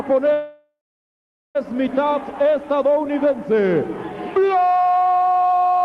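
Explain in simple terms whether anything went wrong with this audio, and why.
From 0.33 to 1.57 s the sound stalls in a call audio freeze: the last sound trails off into a fading buzz or hiss, then about 0.8 s of silence. The likely cause is delayed packets emptying the jitter buffer. Unlike a dropout, nothing is lost; the audio resumes exactly where it stopped, just later.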